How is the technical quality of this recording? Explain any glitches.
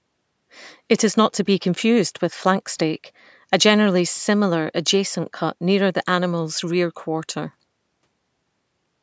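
No glitches can be heard in this speech recording; the sound shows the normal effects of call microphone processing, with the lowest bass removed and nothing above 8 kHz, which is how that path behaves rather than a fault.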